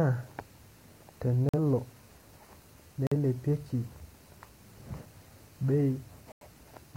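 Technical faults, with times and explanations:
1.49 to 1.59 s, 3.07 to 3.16 s and 6.32 to 6.47 s, corrupt frame muted: the speech drops into dead silence three times, for about 0.10 s, 0.09 s and 0.15 s. Each gap starts abruptly. Damaged compressed frames were rejected by the decoder, and the player filled their slots with silence. The first and last gaps fit two lost frames, the middle one a single frame. Timing holds, so the speech resumes on schedule.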